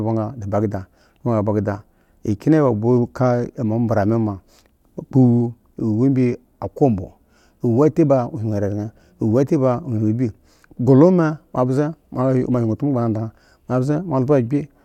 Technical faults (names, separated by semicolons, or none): none